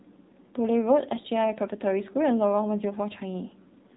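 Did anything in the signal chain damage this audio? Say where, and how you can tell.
Yes, at the codec stage: the whole clip has gone through the AMR narrowband mobile codec. Nothing gets through above about 3.8 kHz, so the speech sounds boxed in and telephone-thin, and the plainly audible buzzy, synthetic edge points to one of AMR-NB's lower modes, around 7.4 kbps. The codec throws away the waveform and rebuilds the voice from a vocal-tract model driven by sparse pulses, so at that bit budget you hear the model more than the talker.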